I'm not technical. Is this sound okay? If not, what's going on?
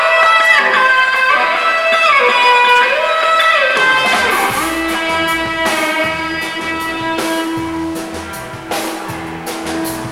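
No. USB whine from 1.14 to 3.51 s: a steady 1 kHz tone, caused by a USB connection's regular power pulses leaking into the audio through shared wiring.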